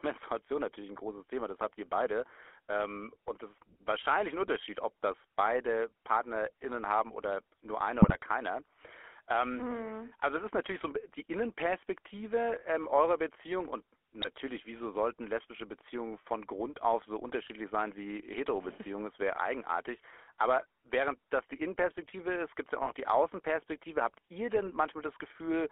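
Throughout the speech there is a plainly audible buzzy, gravelly roughness, band-limited to roughly 300 Hz to 3.4 kHz. This is GSM full-rate codec damage, consistent with the 13 kbps vocal-tract model and pulse excitation.

Short bursts of squawking, popping and gargling break in at 8.02 to 8.16 s just after "haben oder nur einer", at 14.22 to 14.29 s just before "wieso sollten lesbische", at 22.82 to 22.93 s just after "gibt es ja auch", and at 24.64 to 24.73 s. These are GSM bit errors. Corrupted filter, pitch or gain values distort the decoded spectrum and level for a few consecutive frames each time.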